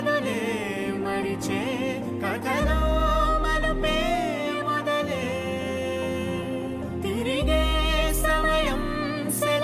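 No technical faults can be heard anywhere in the audio.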